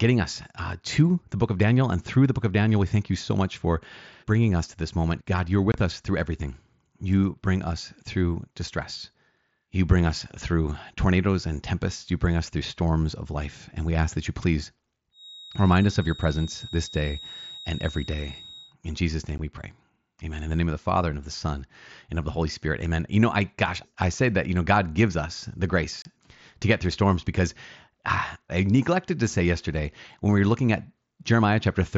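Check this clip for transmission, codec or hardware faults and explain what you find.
Two kinds of fault are present: brief unconcealed dropouts on the Bluetooth headset link, and a sustained feedback whistle.

Unconcealed Bluetooth headset packet loss occurs at 5.72 to 5.74 s, at 19.38 s, and at 26.02 to 26.05 s. Voice packets between headset and phone went missing and nothing filled the gaps, so the mSBC stream simply drops out. The holes last about 22, 15 and 30 ms, which fits three, two and four lost 7.5 ms frames. Each sounds like a sharp, abrupt gap, just before "us through everything", just before "we pray", and between "gives us the" and "to get through storms".

A feedback whistle runs from 15.10 to 18.75 s. A steady tone at 3.8 kHz sits about 20 dB below the sound, thin and slightly wavering in level but never building up. This is likely a loudspeaker-to-microphone loop held just short of runaway, with one frequency circulating around it while the rest of the signal passes.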